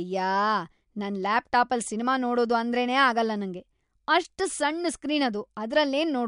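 Nothing in this bit of speech trips the ear as a fault, with no dropout, click, glitch or other defect turning up anywhere along the way.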